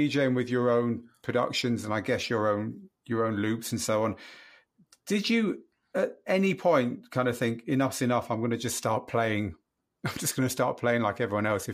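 No technical faults audible anywhere in the speech.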